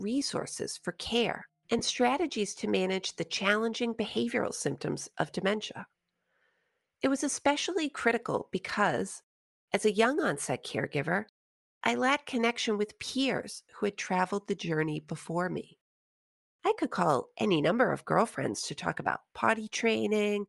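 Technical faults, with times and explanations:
Throughout: Bluetooth LC3 compression is the likely cause of the grainy, breathy upper edge on the speech, with noise-filled highs that fit around 48 kbps in 7.5 ms frames.
1.78–1.81 s: lost LE Audio frames between "resources for care" and "strategies to manage the". About 15 ms of audio is replaced by a brief noisy smear of re-used spectrum.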